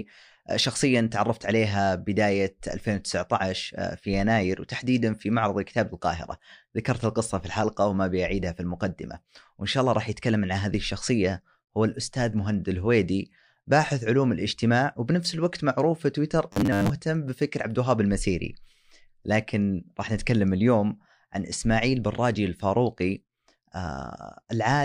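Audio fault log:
16.53 to 16.90 s, robotic sound from repeated short buffers: the speech turns into a rigid, metallic buzz fixed at 100 Hz. That is likely from a 10 ms slice being replayed over most of this stretch while new audio arrives late. Unlike a dropout or stutter, sound never stops, and the buzz still loosely tracks the speech.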